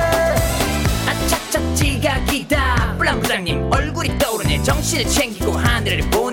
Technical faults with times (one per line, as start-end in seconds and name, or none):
none